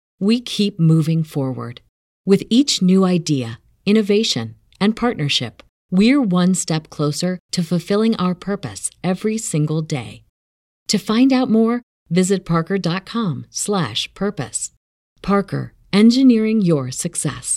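No technical faults are audible.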